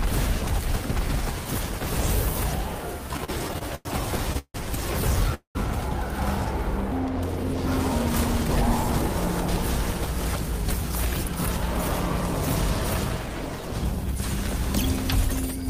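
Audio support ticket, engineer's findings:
Repeated stalls (stutter), 3.13–3.87 s: jitter buffer underrunning over and over as packets arrive late or slower than playout. Seven gaps filled by continuing the last sound, 218 ms in total, longest 101 ms, about 30% of that span. Nothing dropped; audio drags and stutters.

Call audio freeze, 4.38–4.56 s and 5.34–5.57 s: likely network delay draining the jitter buffer, each hold adding its full length to the latency. Sound continues as a fading buzz and then goes silent, 158 ms with 70 ms silent, then 207 ms with 110 ms silent. Resumes where it stopped.

Jitter buffer speed-up, 9.86–11.74 s and 13.01–14.62 s: receiver trimming excess buffered delay by cutting short pitch-period-length slices in quick succession. Playback runs at 102% and then 104% with pitch unchanged, removing around 40 ms and then around 70 ms. Both stay under the roughly 105% where speech starts to sound hurried.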